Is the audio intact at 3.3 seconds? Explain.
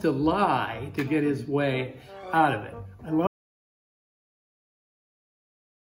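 No. The input was likely lost, with the recorder writing silence, so an audio dropout to silence begins at 3.27 s and lasts to the end, with no room tone.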